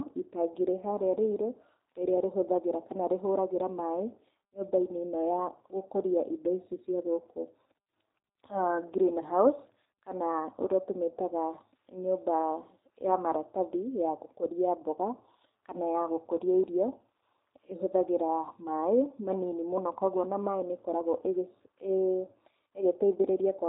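G.729 codec damage runs through the whole speech recording: nothing survives above 3.8 kHz, and the voice sounds plainly rough and synthetic, rebuilt from a vocal tract filter, pitch predictor and sparse pulses per frame, which fits an 8 kbit/s G.729A stream.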